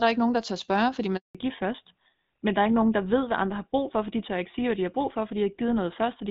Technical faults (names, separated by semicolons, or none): handover gap; fallback to narrowband